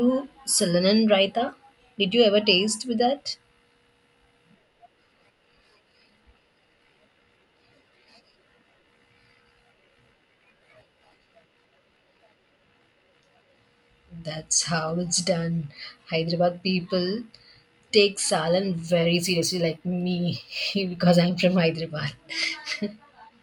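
Imaging from linear upsampling, 18.87 to 21.63 s: straight-line interpolation, consistent with 24 kHz raised to 44.1 kHz, dulls the top and leaves faint mirrored images from 12 to 24 kHz, a light metallic shimmer.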